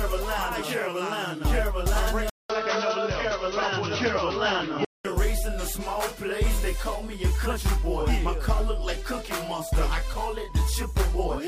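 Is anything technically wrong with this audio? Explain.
Yes. From 2.30 to 5.05 s, the sound loses everything above 6.1 kHz, with a 200 ms gap at the switch. A new noise appears, about 40 dB down. The likely cause is an input switched to a poorer device.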